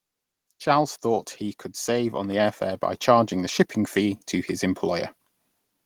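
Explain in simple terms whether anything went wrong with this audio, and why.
Something did go wrong: an automatic gain rising fault. Just after "he could", at about 1.84 seconds, the recording's automatic volume control decided the input was too quiet and began turning itself up, climbing steadily until about 4.27 seconds, just before "to his". The speech grows noticeably louder, and the background noise swells right along with it. That shared rise is the giveaway: a speaker leaning in or talking louder would lift the voice, not the room noise.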